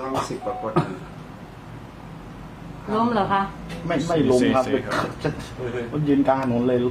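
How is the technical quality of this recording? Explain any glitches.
Four sharp clicks are the only technical problem here, landing at 0.99, 1.85, 4.11 and 6.10 seconds. Each is a single, instant tick, most likely from dropped samples: a tiny slice of the stream, a fraction of a millisecond, goes missing, so the waveform jumps straight from one value to a later one. That gap is far too short to take out any sound, but the abrupt step comes through as a crisp click and a thin vertical line on a spectrogram.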